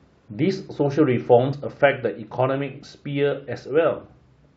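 Compressed frames skipped at about 1.52 s: the speech jumps forward, losing roughly 50 ms, about two frames' worth. The decoder never played those frames, either because they were absent from the stream or were rejected as corrupt, so playback resumed further on by a whole-frame step, which fits a frame length near 23.2 ms.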